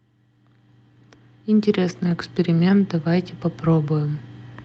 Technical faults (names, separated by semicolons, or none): lost packet rebuilt from error correction